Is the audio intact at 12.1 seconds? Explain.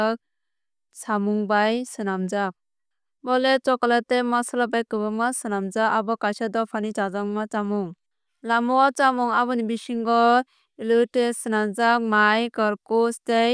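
Yes, the audio is intact at 12.1 seconds, with no audible fault at that moment.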